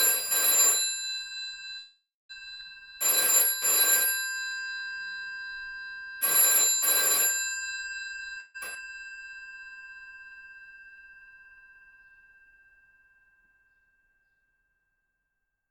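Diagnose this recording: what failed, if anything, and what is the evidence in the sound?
Call audio freeze, network stage. At 1.79 to 2.31 s the sound stops moving forward. The last moment is stretched into a fading buzz for about half a second, and it falls silent for the final 0.23 s. At 8.40 to 8.56 s a shorter 0.14 s fill fades without reaching silence. Each time the audio picks up where it left off, so nothing is lost. The likely cause is delayed packets draining the jitter buffer.

Skip ahead, network and jitter buffer stage. At 2.57 to 2.61 s the audio jumps forward with only a brief seam. Roughly 0.2 s of sound is gone. At 8.74 to 8.77 s a second jump drops roughly 0.3 s. Both sides of each jump are joined almost directly. The receiver threw away a stretch of audio while later packets were already waiting. That removed delay which the freezes had added.

Jitter buffer slow-down, buffer stage. 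From 2.83 to 5.74 s the sound plays at about 93% speed, adding 0.2 s. From 9.06 to 12.68 s it runs at about 92%, adding 0.3 s. The pitch stays put, but events are drawn out and the audio drags. The receiver repeated single pitch periods and slices of quiet, over and over. It did this to rebuild its reserve.

Jitter buffer speed-up, buffer stage. From 8.01 to 8.37 s the sound hurries at about 124% speed. The pitch is unchanged. Roughly 0.1 s of material disappears in small pieces. The buffer held more audio than its target, so it cut out short runs of one or a few pitch periods. Straight after that, the 8.40 s freeze hits. This shows the delay swinging back and forth in this stretch.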